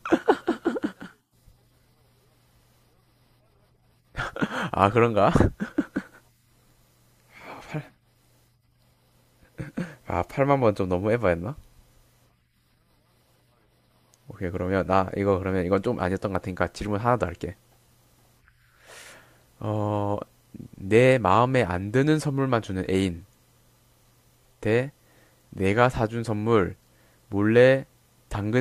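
Speech recording, with no audible technical faults at any point.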